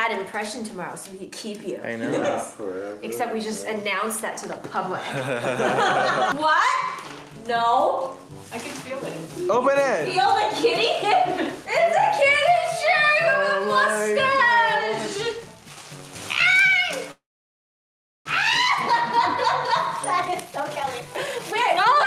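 At 17.11 s the sound stops and the receiver carries the last fragment forward briefly, then falls to near silence for about 1.05 s until 18.27 s: a call audio freeze. The likely cause is packets held up in transit, draining the jitter buffer. Playback resumes where it stopped, so nothing is lost, but everything afterwards is delayed by roughly 1.14 s.

From 20.13 s to 22.05 s a jitter buffer speed-up follows. The receiver trims short pitch-period pieces repeatedly to shed the accumulated delay, discarding around a second in total. The audio plays at about 151% speed with unchanged pitch, sounding noticeably rushed.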